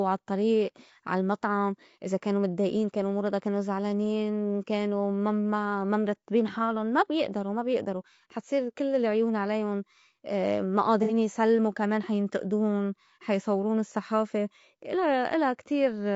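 Throughout, the speech carries the marks of low-delay AAC compression, likely AAC-ELD at a low rate; the damage fits a bitrate of around 32 kbps. Its very short frames resolve the pitch harmonics coarsely and spend bits inefficiently, so the encoder runs short. The result is plainly audible: the voice sounds rough and grainy, noise fills the gaps between harmonics, and the top band has a dulled, synthetic quality.

From 11.03 to 11.12 s, AAC frame loss with concealment takes over. About 60 ms of coded audio, consistent with two lost frames, never reached the decoder, which rebuilt the gap from the last good spectrum rather than leaving it silent. That stretch comes out as a brief smeared, noisy patch, before the decoded sound resumes.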